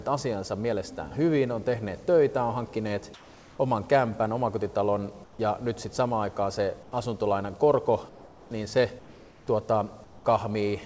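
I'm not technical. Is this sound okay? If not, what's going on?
No. In the quiet gaps, the natural background briefly turns into a flat, softer hiss at 3.14–3.59, 5.24–5.39, 6.83–6.92, 8.09–8.51, 8.99–9.47 and 10.04–10.25 s. This is comfort noise in place of the background, likely because the call paused sending during those moments and the receiving end filled them with synthetic noise.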